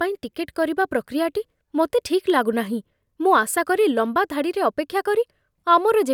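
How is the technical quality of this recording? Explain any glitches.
There are no glitches to explain: the technical quality of this recording holds up with no faults to be heard.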